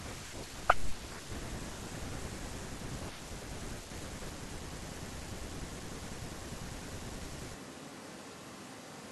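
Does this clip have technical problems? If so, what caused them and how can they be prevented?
Yes. At 7.56 s the speech abruptly turns roomy and hollow, with thinner bass, and stays that way to the end of the clip. The level drops by about 5 dB and room noise rises to roughly 25 dB below the speech. This is a switch to a distant microphone: the close mic's signal was likely lost, so the recording fell back to one farther away that captures more room reflection. Monitoring the close mic and securing its connection prevents this.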